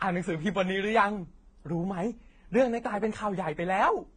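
Transcoding between lossy codecs runs through this speech clip: nothing above 9.6 kHz, with stacked codec artefacts pointing to low-rate AAC likely re-encoded as Vorbis.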